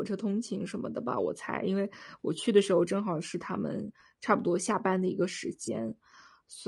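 A speech clip carries plainly audible coding damage throughout, most likely low-delay AAC compression of the AAC-ELD kind used for video calls, at a rate that sounds like about 32 kbps. The voice is rough and grainy, with noise filling the gaps between pitch harmonics and a thin, synthetic-sounding top band. The short low-delay frames blur the harmonic structure, which sets this apart from ordinary low-bitrate AAC, where the harmonics stay cleaner and the usual artefact is swirly pre-echo or a dull, band-limited top. At 5.65 to 5.68 s there is AAC frame loss with concealment: a brief smeared, noisy or phasey patch where the decoder rebuilt the missing audio from the last good spectrum. The gap fits a single lost frame of about 20 ms. Because the patch holds the surrounding spectral colour and never drops to silence, it is distinct from a dropout or a click.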